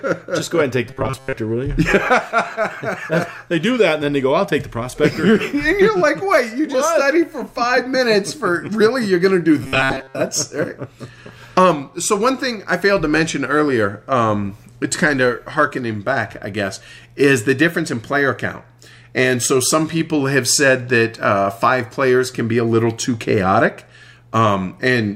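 From 0.87 to 1.33 s and 9.63 to 10.16 s, the sound becomes a rigid, metallic 133 Hz buzz. This is robotic sound, likely from repeating a 7.5 ms buffer through most of each stretch.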